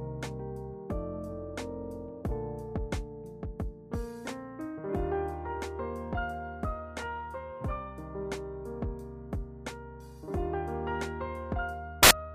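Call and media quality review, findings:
Samples built from the wrong bytes, 12.03 to 12.11 s: the sample reader is misassembling bytes, either off by one byte, in swapped order or with the wrong alignment. The rapidly changing low bits land in the high-order position, so each value becomes essentially random. The result is an 80 ms burst of loud, harsh broadband noise replacing the audio. Probable component: the decode or format-conversion stage.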